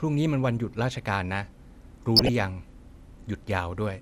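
Throughout, the speech has a dull, band-limited quality with a granular, gurgling edge, and the damage is plainly audible. This is most likely MP2 compression. MPEG Layer II divides the signal into 32 sub-bands and allocates bits to each. At a rate that sounds like around 80 kbps, upper bands drop out intermittently, and the remaining bands are quantised coarsely. The result is the muffled, flickering texture heard here.

From 2.16 to 2.29 s, a short burst of DAB burbling sits over the speech, lasting about an eighth of a second. Residual bit errors, consistent with an error rate of a fraction of a percent, have got past error correction into the MP2 stream. Corrupted samples put short blips of noise into single sub-bands, which produces the burbling artefact.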